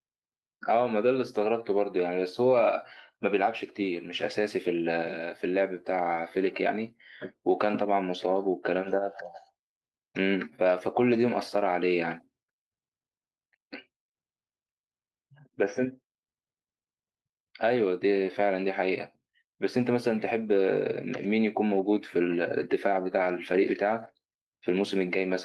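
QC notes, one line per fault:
Nothing stood out on listening to this speech recording.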